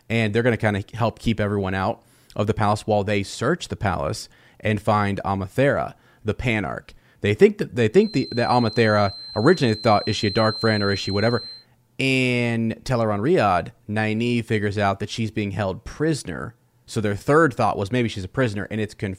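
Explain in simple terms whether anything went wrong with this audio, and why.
Right after "they think that they", from about 7.9 to 11.7 s, a thin whistle at one steady pitch around 4.1 kHz sits quietly behind the speech, slowly swelling and fading. That's a feedback whistle, likely a speaker-to-microphone loop hovering at the edge of feedback, ringing without running away.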